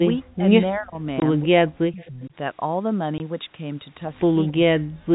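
From 0.18 to 0.45 s and again from 0.73 to 1.05 s, the speech is pushed down hard, by about 40 dB and then about 30 dB. From 1.20 to 1.22 s there is a 20 ms hole of pure silence. This is packet loss filled with silence, and it fits one lost 20 ms packet. Between 1.44 and 2.33 s the speech sinks again, by about 40 dB. Inside that stretch, from 2.01 to 2.07 s, a faint copy of the sound returns 262 ms late, about 30 dB under the speech. This is likely an echo leak. A loudspeaker's output slipped past an echo canceller and came back. At 3.18 to 3.20 s another single 20 ms silent gap appears. From 4.57 to 5.13 s the speech drops away once more, by about 40 dB. These repeated dips all point to speech suppressed in double talk. The echo canceller heard both sides at once and turned the talker down with them.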